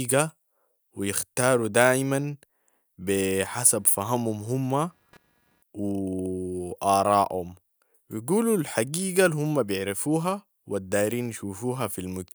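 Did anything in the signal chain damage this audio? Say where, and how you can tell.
Yes. Computer activity noise enters in the analogue wiring from 3.40 to 5.63 s. A faint buzz, pulsing at around 200 Hz, sits roughly 35 dB below the speech. It ignores the speech. Processor or graphics load is shifting the shared ground under the audio circuit.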